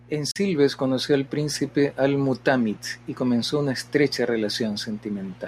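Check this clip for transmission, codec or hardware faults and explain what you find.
Two faults are present. Mains hum: a steady low 60 Hz tone sits under the speech throughout, roughly 25 dB down, from the power line coupling in through a ground loop or nearby transformer. Bluetooth dropout: a sharp silent gap from 0.31 to 0.36 s, about 43 ms, cuts in just before "conoció al príncipe". The speech then resumes as if it had kept playing. The likely cause is wireless audio packets arriving too late and being dropped, which fits a couple of lost packets.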